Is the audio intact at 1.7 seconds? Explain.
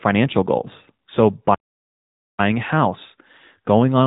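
No. A playback stall runs from 1.54 to 2.39 s, so the output is silent at 1.7 s for about 0.84 s. The sound then resumes with "a house". The likely cause is that the player ran out of buffered data or its thread was blocked, so nothing reached the output until it recovered.

The AMR narrowband mobile codec also affects this moment, as it does the whole clip. Nothing above 3.8 kHz passes, and the speech has a plainly audible buzzy, synthetic quality from the pulse-driven vocal-tract model at 10.2 kbps.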